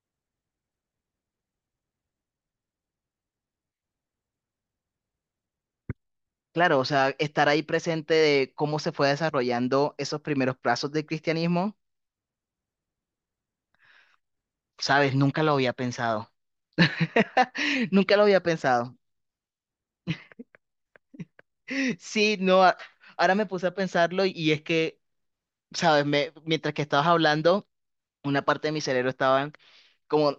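No technical faults can be heard in this speech recording.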